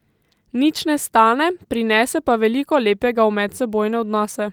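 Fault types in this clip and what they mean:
Listening through the speech, nothing stood out as a technical problem.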